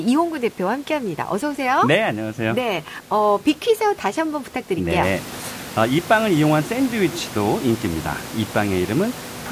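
No technical faults can be heard in the speech. The room's background noise rises by about 11 dB around the five-second mark and then stays about 16 dB below the speech.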